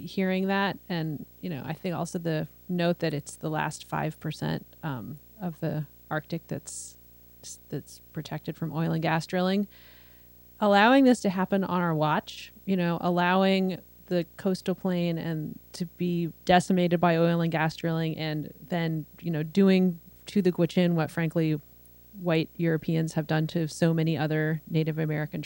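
Video or display buzz runs under the speech for the whole clip, well below it but always present: a raspy buzz at 59.94 Hz with hash above it, plus a thin whine at 15.7 kHz. That line-rate tone and the slightly off-60 field rate separate it from mains hum.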